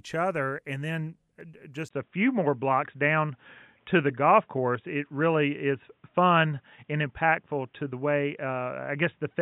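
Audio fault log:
1.41 s, block of digital silence: a 0.73 ms hole, which fits a 32-sample buffer, cuts abruptly to zero and back, so it is heard as a single tick rather than an audible gap.
1.89–9.42 s, input switched to a poorer device: after a 20 ms silence, the sound turns dull with nothing above 3.8 kHz, a level shift of about 5 dB, and new noise about 50 dB down, likely from a change of microphone.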